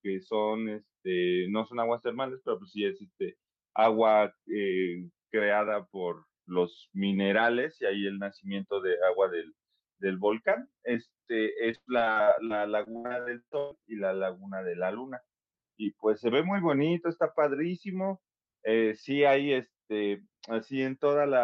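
Speech, with repeated packet loss (robotic sound) from 11.71 to 13.73 s. Packets keep going missing. Each hole is patched by extending the last sound, and another soon follows. About a third of that stretch is patched. The longest gap is 137 ms. The sound turns choppy.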